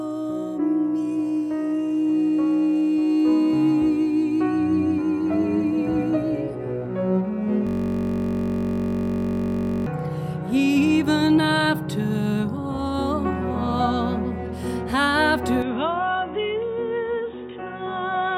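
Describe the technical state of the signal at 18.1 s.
At 18.1 s the signal sits within a band-limited stretch running from 15.62 s to the end, with nothing above 3.8 kHz, a drop of roughly 5 dB, a new noise floor well below the signal, and no gap at the changeover. The cause is likely an input switched to a poorer device, whose narrower response makes the sound duller and boxier.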